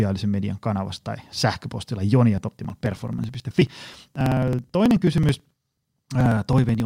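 Speech, with periodic USB or driver dropouts from 2.38 s to 6.8 s: every 54 ms, around 10 ms of audio is skipped, giving evenly spaced ticks during the speech. A spectrogram shows regularly spaced thin vertical broadband lines, and the waveform shows abrupt splices without silent gaps.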